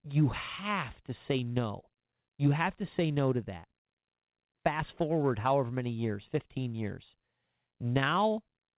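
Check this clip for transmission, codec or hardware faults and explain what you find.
Nothing faulty turns up in this speech recording.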